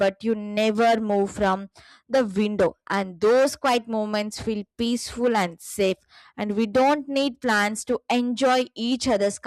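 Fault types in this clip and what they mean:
Nothing here calls for a fault line, since no technical problems turn up anywhere in this speech recording.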